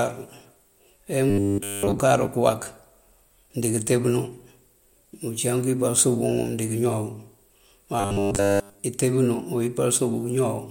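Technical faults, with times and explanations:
1.30 to 2.00 s and 8.00 to 8.84 s, robotic sound from repeated short buffers: new audio is likely arriving too slowly, so the playback side keeps looping the last 10 ms of speech instead of waiting, which fits a 10 ms buffer. The loop imposes a steady 100 Hz buzz that turns the speech into a rigid, metallic buzz, with most of the first stretch and all of the second replaced, the latter ending just before "intee bunú".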